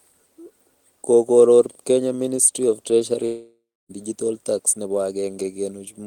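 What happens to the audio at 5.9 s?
Nothing goes wrong at 5.9 s: the speech carries on intact there, with no dropout, click, distortion or other audible fault at that moment.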